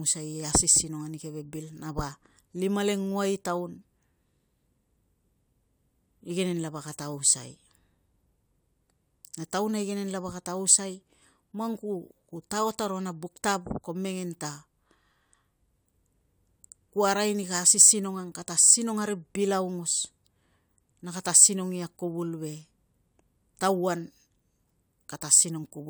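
No technical faults can be heard anywhere in the speech recording. Nothing in it calls for a timestamp or an explanation.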